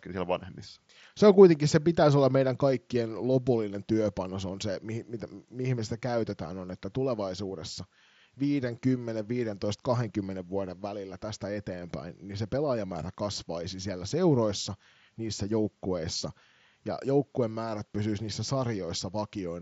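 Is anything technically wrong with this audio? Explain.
No, the speech comes over what sounds like a Bluetooth mSBC headset link working as intended, with the usual wideband ceiling near 8 kHz and only the light graininess that codec leaves on louder passages.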